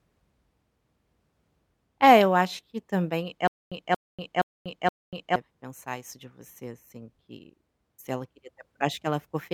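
From 3.47 s to 5.36 s, just after "eu acho que também", the speech breaks into a stutter with silent gaps. A fragment of about 229 ms plays, then about 242 ms of dead digital silence follows, repeating at a steady 471 ms period, four times. Normal playback resumes at "pensar isso de você". The likely cause is a stalled player or stream that replays its last buffered fragment on each retry and then runs empty, so the speech that belonged in that span is lost.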